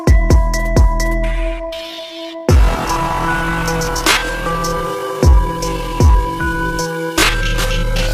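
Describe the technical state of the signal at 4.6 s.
At 4.6 s you're inside a time-stretched section that runs from about 1.63 s right through to the end at 8.13 s. The audio has been slowed to roughly 0.59 times its pace, and the pitch hasn't dropped with it, so it was likely stretched by software that repeats short slices to fill the extra time. That's why it drags, with the pace shifting abruptly where the section begins.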